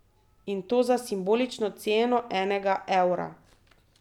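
No technical faults detected.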